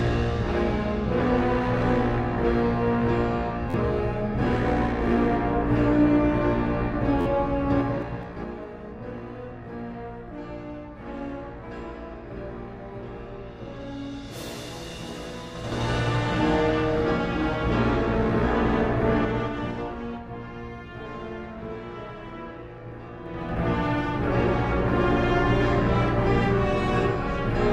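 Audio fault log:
3.70–3.74 s and 7.21–7.26 s, repeated buffer: One short slice plays again three times, then four times, with hard joins. Late audio causes a buzzing stutter. Each slice is about 11.6 ms, which fits a 512-sample buffer.
7.71–8.64 s, 15.51–15.88 s, 19.13–20.25 s, 23.22–23.59 s, zipper noise: Level falls, rises, falls, then rises about 15 dB in 3 dB unsmoothed steps. Each step clicks, giving a ticking of roughly 5, 10, 4 and 15 steps per second.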